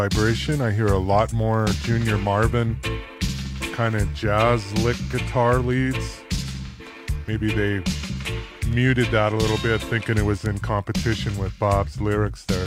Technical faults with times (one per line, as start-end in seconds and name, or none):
6.66-6.86 AAC frame loss with concealment
10.46 bit error spike